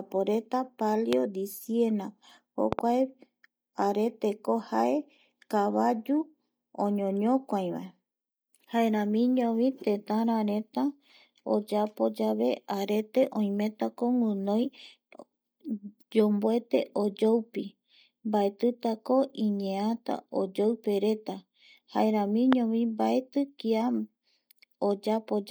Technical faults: loud pop

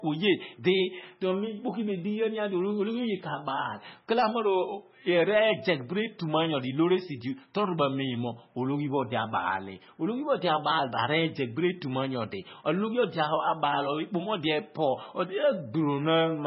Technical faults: MP3 compression

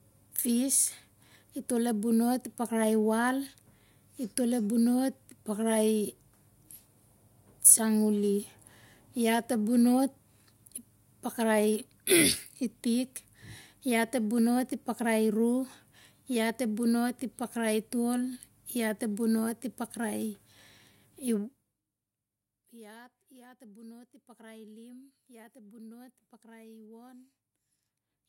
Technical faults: none

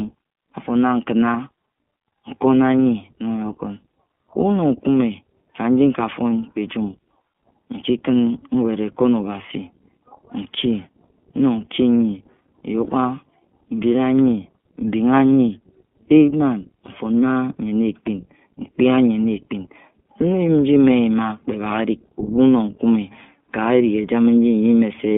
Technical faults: iLBC codec; lost iLBC frames

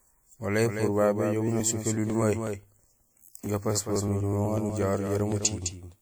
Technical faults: doubled audio track; periodic USB or driver dropouts

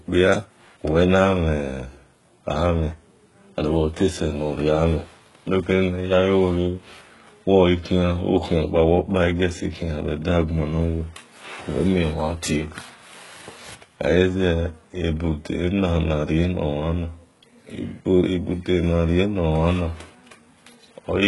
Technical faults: HE-AAC compression

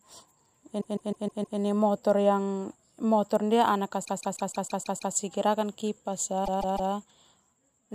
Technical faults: repeated frames

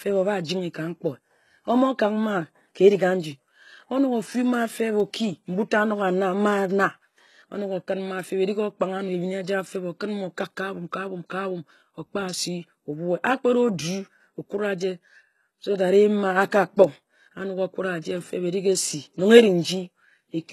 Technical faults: HE-AAC compression

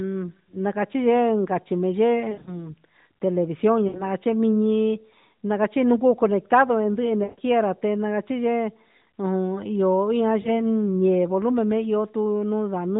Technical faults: lost AMR speech frames

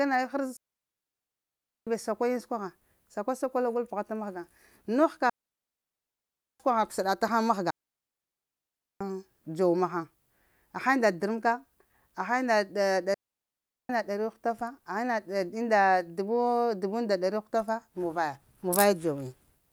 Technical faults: digital wireless dropout

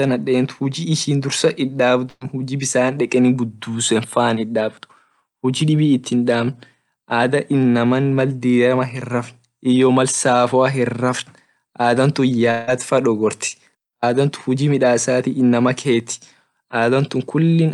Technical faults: burst of packet loss; long network dropout

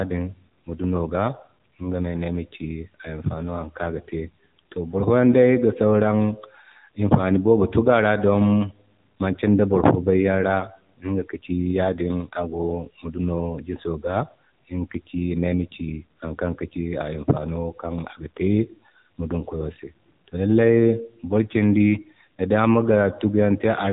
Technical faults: AMR narrowband mobile codec

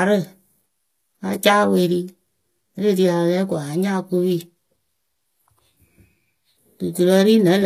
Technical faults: HE-AAC compression

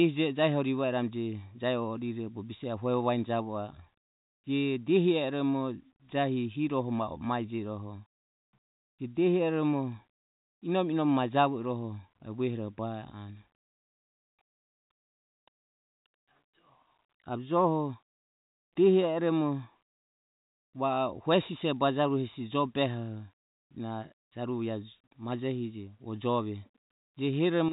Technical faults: none

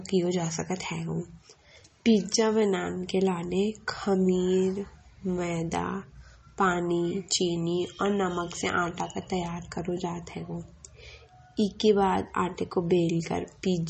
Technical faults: MP3 compression

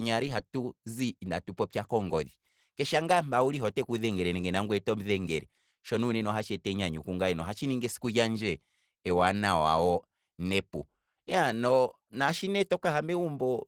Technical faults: Opus compression

